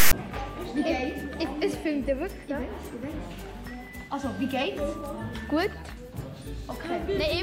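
File tags played as audio open the clip, from 0.00 to 0.13 s. A block of text metadata was decoded as if it were samples, producing a loud, hard-edged rasp pushed off to one side, followed by a moment of dead silence where zero padding was read.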